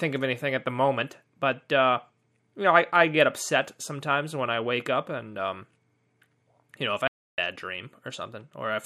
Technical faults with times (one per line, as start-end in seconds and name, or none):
7.08-7.38 audio dropout to silence